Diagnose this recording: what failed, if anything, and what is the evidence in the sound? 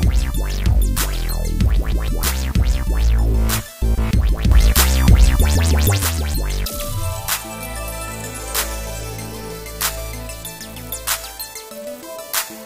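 A sudden gain jump hits at 4.52 s: sound and noise floor step up together by about 6 dB until 5.98 s, likely an unramped digital gain change in processing.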